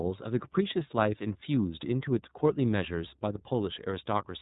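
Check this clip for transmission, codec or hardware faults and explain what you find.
One fault runs through the whole speech clip: iLBC codec damage.

From start to finish, the iLBC codec codes each 30 ms frame separately, rebuilding its excitation without drawing on the previous frame, which fits the 13.33 kbps mode. The speech sounds plainly rough and synthetic. A spectrogram shows an empty band above 3.8 kHz, and the waveform looks coarser, with less fine detail.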